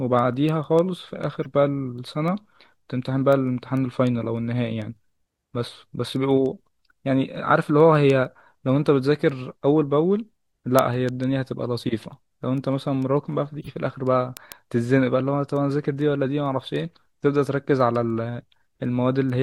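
From 0.19 s to 19.3 s, the receiving device runs on its own clock, unlocked from the sender's and off by something like 150 ppm. Each time the clocks slip, a sample is dropped or repeated, giving word clock ticks at a steady rate, roughly every 0.15 s, around 150 in all.

At 1.43 to 1.46 s, one compressed frame arrives with flipped bits and is decoded anyway, so energy lands at wrong frequencies: a brief corrupt frame decoded blip, peaking about -25 dBFS. At 13.60 to 13.68 s, several damaged frames produce a longer, louder burst, peaking about -20 dBFS.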